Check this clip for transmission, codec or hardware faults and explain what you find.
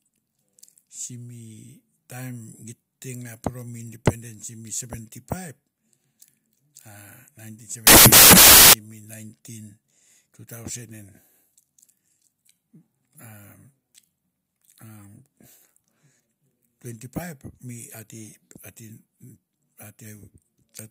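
One fault is present. From 7.87 to 8.73 s the speech turns into loud, harsh broadband noise. These are samples built from the wrong bytes: a misaligned or byte-swapped read lets each sample's fast-changing low bits dominate its value.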